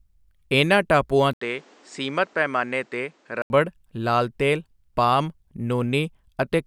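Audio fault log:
1.33–3.50 s, input likely switched to a poorer device: After "ਇਨ੍ਹਾਂ ਟਾਪੂਆਂ" the speech drops out for 80 ms, then returns duller and boxier. Nothing above 8.9 kHz gets through, so the top end is gone. A faint new background noise sits well below the speech. Loudness barely changes. The narrower band and the different noise floor point to a lesser microphone path. Full clarity comes back before "ਲਾਲ ਤੇਲ ਪਾਮ".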